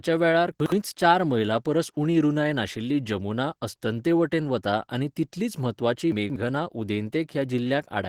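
A speech recording coded throughout with Opus voice compression in hybrid mode, where a linear-prediction coder handles the band up to 8 kHz and a transform layer covers the range above. The coarseness of both layers points to a low rate of about 16 kbps. The band stays full, with content reaching to about 20.3 kHz, but the damage is plainly audible: the voice sounds hoarse and slightly robotic. There are also two spots of chunks out of order. Between 0.6 and 0.72 s, a 60 ms chunk plays one chunk late. Between 6.12 and 6.36 s, a 60 ms chunk plays three chunks late. In each case the audio is reordered rather than lost. This produces a brief jumbled stretch with hard joins, and the second spot lasts longer.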